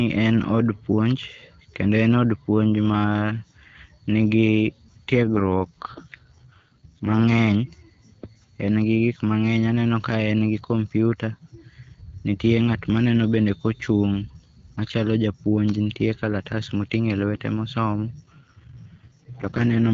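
From 5.22 to 7.24 s, and again from 18.22 s to the end, the speech turns rough and synthetic with no gap or loss of bandwidth. This is an AMR rate drop, with the codec switching to a lower mode, which fits a fall from 12.65 to 6.6 kbit/s.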